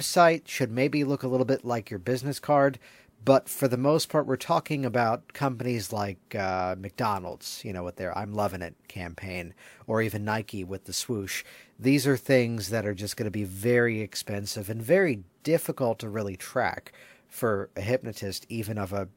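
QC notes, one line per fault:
No faults found in this clip.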